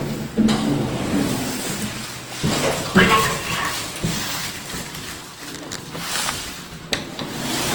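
Hard clipping at 2.97 to 3.15 s in this recording of everyday sounds: peaks overdriven by about 4 dB are cut flat, adding a brief crackle. Generation loss runs throughout, likely from around seven rounds of Opus encoding at roughly 48 kbit/s. Each pass requantises on a shifted frame grid, so the sound turns swirly and hollow with blurred attacks, and nothing remains above 20.1 kHz.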